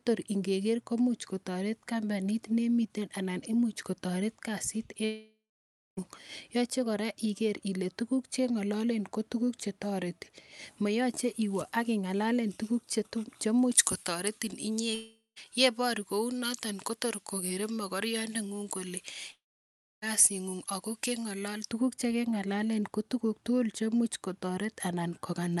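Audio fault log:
5.05–5.99 s, 14.95–15.38 s, 19.32–20.04 s: long network dropout. The sound smears into a fading buzz, then goes silent for about 0.58, 0.13 and 0.63 s. It resumes with material missing, likely from lost packets.
13.72–21.71 s: pre-emphasis left on. A J.17-style treble lift stays uncorrected, about 11 dB up at 10 kHz relative to 1 kHz, so the speech turns thin, bright and sibilant up to the Opus path's 12 kHz limit.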